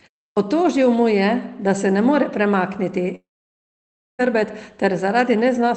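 Right at 0.32 s the speech comes in with a clipped start after the pause: the output device was still waking, so about 47 ms of the onset is missing. Then from 3.15 to 4.21 s there's a long dropout, likely a network one: a short buzzy tail fades into roughly a second of silence, and the audio resumes with that stretch gone.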